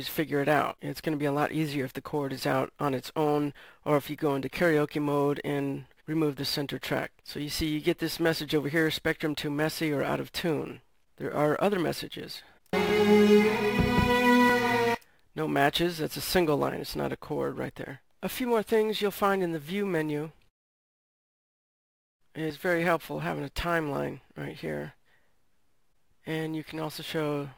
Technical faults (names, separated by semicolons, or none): sample clock jitter